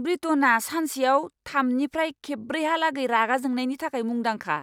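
Listening closely to the speech recording, nothing stood out as a technical fault at any point.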